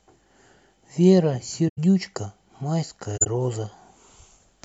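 At 1.68 s the speech is disrupted for about 0.10 s. The same thing happens again at 3.17 s, also for about 0.10 s. Both are corrupt frames concealed by the decoder. Damaged AAC data was detected and hidden rather than played as noise. The gap is muted or smeared instead of squeaking. Each gap's length fits roughly four AAC frames.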